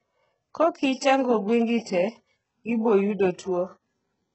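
Across the whole speech clip the treble above about 8 kHz is gone, and the upper band that remains sounds gritty and metallic, with lispy s sounds. This is likely HE-AAC compression at a very low bitrate, around 8 kbps, where spectral band replication rebuilds the top octave from copied lower bands. A spectrogram would show a hard ceiling at 8 kHz and blocky, smeared treble whose harmonics fail to line up with those below.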